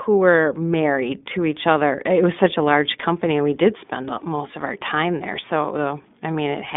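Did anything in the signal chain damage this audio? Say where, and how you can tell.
Yes. Throughout the speech there is a narrow, slightly rough and synthetic tone, with nothing above about 3.7 kHz and a line band of roughly 200 Hz to 3.6 kHz. This points to the iLBC codec, which fits 15.2 kbps mode with 20 ms frames, each coded independently.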